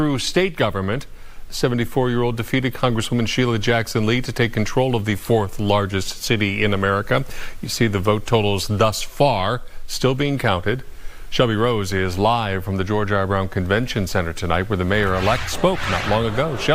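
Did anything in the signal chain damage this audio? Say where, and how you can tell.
No, nothing in the signal chain damaged this audio.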